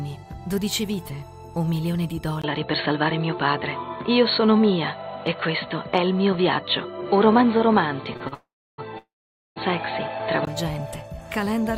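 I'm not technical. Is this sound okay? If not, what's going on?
No, there are clear problems.

Input switched to a poorer device, from 2.42 s to 10.47 s: after a brief 20 ms silence, the sound turns dull and boxy, with nothing above about 4.3 kHz, so crisp high detail disappears. The level shifts a little and a faint new background noise appears. This is likely because the recording jumped from one microphone to a lower-quality one, such as a headset in call mode, before switching back.

Short stall from a late packet, at 8.17 to 8.22 s and again at 8.28 to 8.34 s: a small chunk of audio arrived late, so the player stretched the last bit of sound for 33 ms and then 38 ms while waiting. Nothing is lost, but the sound briefly hangs with a slight buzz or dip before carrying on.

Call audio freeze, from 8.34 to 8.80 s and from 8.98 to 9.58 s: the audio stops moving for 443 ms and then 578 ms. 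It starts as a fading buzz or hiss and then drops into near-silence, about 310 ms the first time and 480 ms the second. This is likely a longer hold-up of data on a call connection. When the sound resumes, it picks up exactly where it stopped, so the clip gains pauses rather than losing anything.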